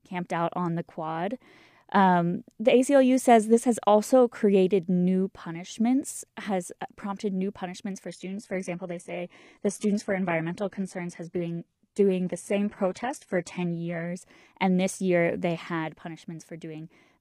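Adaptive stream at a lower bitrate, from 8.07 to 14.07 s: the audio switches abruptly, with no gap, to a thinner, more synthetic-sounding version with nothing above 11.8 kHz. This points to the stream dropping from roughly 96 kbit/s AAC to about 16 kbit/s HE-AAC for six seconds.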